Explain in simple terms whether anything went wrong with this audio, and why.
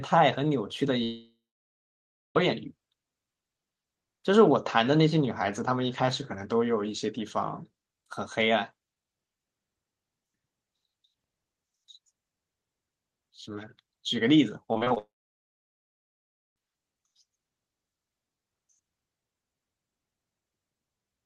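Two things went wrong, both caused by the connection rather than the recording.

Long network dropout, twice: from 1.03 to 2.37 s and from 14.98 to 16.58 s the sound cuts out. Each time the receiver briefly stretches the last bit of sound into a fading buzz, then goes quiet, for about 1 s in the first gap and about 1.5 s in the second. When the sound returns, the missing part is simply gone. The likely cause is that no audio data arrived from the network for over a second.

Repeated packet loss (robotic sound): just before the second dropout, from 14.73 to 14.98 s, the sound turns choppy. Five small pieces, none longer than 20 ms, went missing in quick succession, and each was papered over by repeating the previous sound. That patching covers about a third of this quarter-second, which is why it sounds choppy rather than natural. Here the connection was already faltering before it failed completely.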